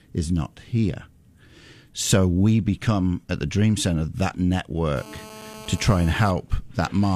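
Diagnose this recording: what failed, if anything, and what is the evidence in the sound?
GSM phone buzz in the analogue stage, from 4.96 to 6.31 s: a hard, raspy buzz at about 217 Hz with a dense harmonic series, steady throughout and about 19 dB below the speech. A nearby 2G handset on a call bursts 217 times a second, and the audio circuitry rectifies those radio pulses into the signal path.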